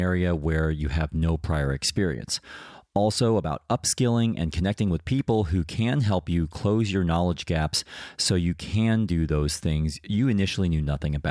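No technical faults can be heard anywhere in the speech recording, with the signal holding steady in level and continuity throughout.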